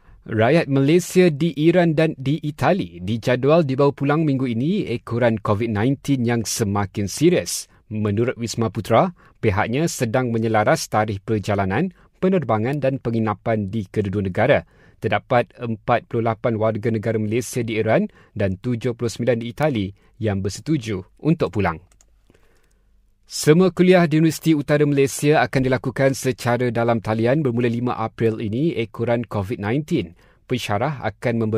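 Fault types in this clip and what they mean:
Bit error spike: two isolated, sharp ticks cut through the speech, one at 12.73 s just before "dan penginapan di kedua" peaking at about -14 dBFS, and a louder one at 19.63 s at about -8 dBFS. Each lasts a single sample, so it is a bright click spread across the whole spectrum, unrelated to the speech. The cause is one flipped bit in memory or on a digital link, making that sample jump by a power of two before returning.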